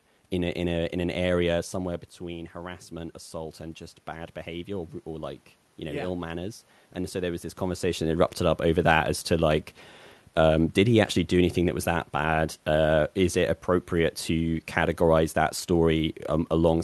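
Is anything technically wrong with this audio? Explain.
Yes. From 1.77 to 8.08 s, after "a in an area" and before "that erupted up over", there is automatic gain rising. When the talker moves away, the input drops about 10 dB, and the gain control slowly adds about 6 dB, so voice and room noise swell together. On a waveform, the envelope and noise floor climb steadily across that span.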